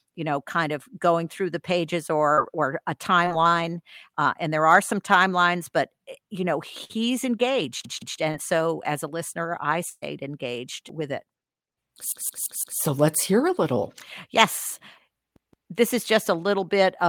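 At 2.33 to 2.39 s, shortly after "or a" at 3.25 to 3.28 s, and at 8.31 to 8.35 s there is short concealed packet loss. About 20 to 40 ms of the call never arrived, and the receiver bridged each hole by extending the preceding sound. Unlike a burst, these are only a brief smear or wobble, with no fading tail.

At 6.84 to 6.91 s and 9.89 to 10.04 s, a burst of packet loss removes about 40 ms and then 120 ms. The held-over sound dies away as a buzz or hiss, and at 9.89 s it sinks into about 20 ms of silence before the speech picks up further along.

At 7.85 to 8.19 s, 12.12 to 12.80 s (ending just before "let's hear a little"), and 15.36 to 15.71 s (between "hear a little yes" and "this is just a"), a repeated buffer occurs. When fresh audio was late, the device replayed the same chunk of about 171 ms twice, four times, and twice again. That length fits an 8192-sample buffer. The result is a stutter with hard joins. 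Unlike packet loss, the speech resumes with essentially nothing skipped.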